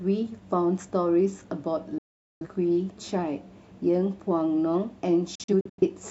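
Digital broadcast dropouts mute the speech from 1.98 to 2.47 s and from 5.35 to 5.91 s. The receiver lost good frames and cut out within 3 ms. The second dropout is broken into short holes.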